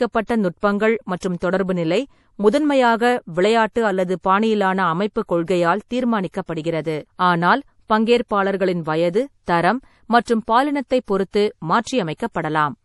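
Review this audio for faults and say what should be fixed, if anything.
Throughout the speech, nothing reaches above 11.5 kHz, and the remaining highs sound watery and swirly as weak frequency lines switch on and off between frames. This plainly audible damage points to MP3 compression, likely at a low bitrate around 48 kbps. Unlike a plain low-pass filter, which only dulls the top end, it leaves chirping artefacts on s sounds and smeared attacks. Encode at a higher bitrate, or deliver from an uncompressed master instead of re-encoding to low-rate MP3.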